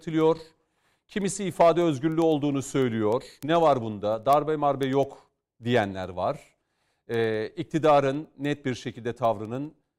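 A speech recording with word clock ticks running nearly the whole way through, from 0.11 s to 9.96 s. They come at a steady clip of about ten a second, around a hundred in all. The receiving device was free-running instead of locked to the sender's clock, and the two drifted apart by something like 200 ppm. Every time they slid a sample apart, one sample got dropped or repeated, and that's the tick you hear.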